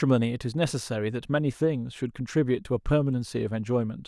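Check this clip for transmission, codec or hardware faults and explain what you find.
Nothing to flag here; the speech holds together steadily throughout, and there's no fault to point to.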